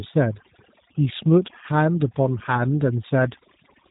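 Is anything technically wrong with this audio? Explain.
Yes, two faults run through the whole speech clip.

Overdone noise removal: an over-aggressive noise reducer pulls bands near its noise estimate down, leaving near-silent gaps with twinkling specks.

G.729 codec: a low-rate VoIP codec rebuilds speech from a filter, pitch predictor and pulses, fitting 8 kbit/s. Nothing passes above 3.8 kHz, and the codec damage is plainly audible: the speech sounds slightly rough and synthetic, not merely muffled.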